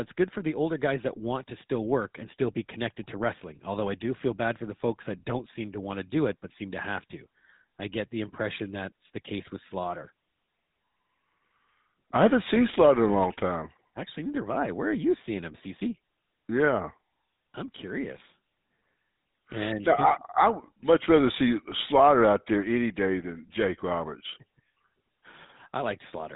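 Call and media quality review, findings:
GSM full-rate codec, entire clip. Buzzy, gravelly roughness on the speech, plainly audible throughout. Band-limited, nothing above 3.8 kHz. Probable component: narrowband telephony leg, consistent with a 13 kbps GSM full-rate encoder. Mechanism: vocal-tract model excited by a sparse regular pulse train, decimated excitation losing fine detail.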